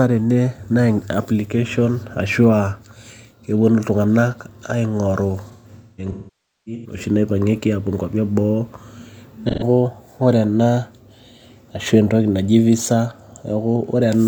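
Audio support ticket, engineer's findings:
AAC frame loss with concealment, 5.51–7.03 s: speech turns smeared and phasey, sinks toward silence on the longest gap (around half a second), then fades back. About 1 s lost in bursts over 1.5 s. Decoder rebuilding from last good spectrum.

Same again, 9.49–9.64 s: short noisy, phasey blip, about 0.13 s missing. The decoder is papering over it with the previous spectrum, too brief to fade out.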